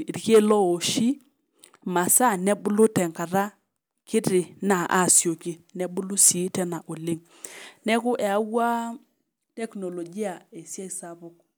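Nothing in this speech recording stood out as a technical problem on listening.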